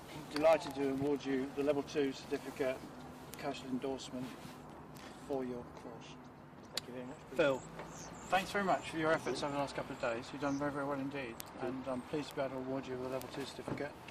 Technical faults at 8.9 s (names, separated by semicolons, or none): word clock ticks